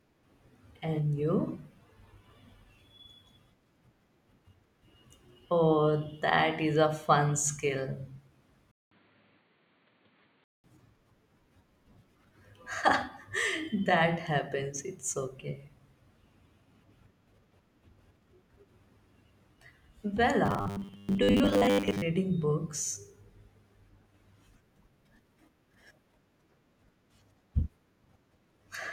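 Input switched to a poorer device from 8.71 to 10.64 s of the speech: after a 200 ms silence, the band narrows at an unchanged level, likely from a narrower-band microphone. Robotic sound from repeated short buffers from 20.46 to 22.02 s imposes a rigid 100 Hz metallic buzz, likely from repeating roughly 10 ms buffers in place of most of the real audio.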